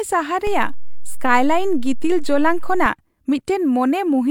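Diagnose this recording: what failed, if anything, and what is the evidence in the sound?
A DC step occurs at 0.47 s, with the offset lasting until 2.86 s. Either a converter recalibrating or an input carrying an offset being switched in shifts the waveform's zero line. Each step in or out is heard as a low thump or click while the speech continues unchanged.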